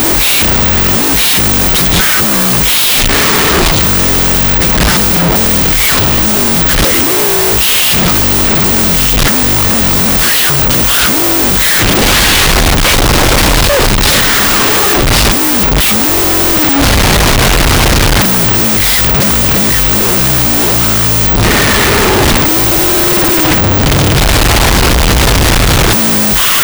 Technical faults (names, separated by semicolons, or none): wrong sample width